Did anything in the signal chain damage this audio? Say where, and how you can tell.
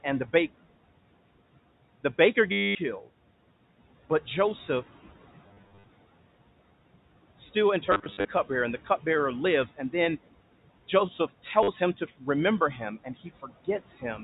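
Yes. Call processing damages it throughout. A noise suppressor pulls the room noise down by about 17 dB between phrases, then lets it rise under the speech. The suppressor's band gains keep shifting frame by frame.

The network stage drops packets, and the receiver repeats the last one. The drops are at 2.52–2.75 s, 5.48–5.84 s (scattered), 7.87–8.25 s just before "cupbearer and the", and 11.63–11.68 s. Each sounds like a short robotic stutter, with a buzz that fits 10 ms packets.

Call processing also clips speech at 13.04–13.49 s. The suppressor treats quiet speech as noise and turns it down with the background, by about 12 dB at the deepest. Roughly a tenth of a second in total sounds swallowed and faint.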